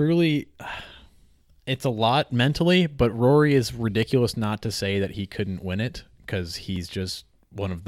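At 4.03 s, just before "not to say that", a block of digital silence drops in. The audio drops out to silence for about 0.7 ms and straight back, with no fade. With a gap this short, it is heard as a tick. At 6.76 s, just after "couldn't win it because", it happens again. This gap lasts 1.45 ms, which fits a 64-sample buffer left unfilled in time. It also sounds like a tick.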